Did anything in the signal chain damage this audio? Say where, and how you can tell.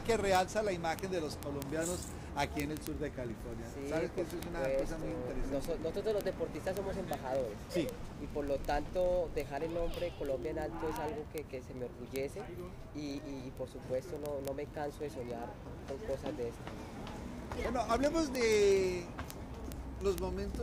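Yes. From 0.11 s to 20.62 s the audio carries a steady train of sharp, uneven ticks, around fifty per second and about a thousand in total. These are word clock ticks at the digital interface. The receiving device was running on its own clock rather than locking to the sender's. The two rates differed by roughly 0.1 percent, so about every 20 ms the clocks slipped past each other and one sample was dropped or repeated, leaving a click each time.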